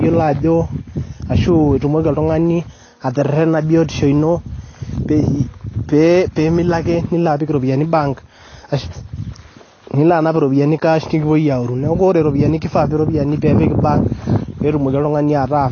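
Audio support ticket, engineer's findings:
Dull, band-limited speech throughout, nothing above 6.6 kHz, smeared fizzy sibilants; likely AAC compression, AAC-LC at a low bitrate, consistent with about 24 kbps, lowering cut-off and starving spectral detail.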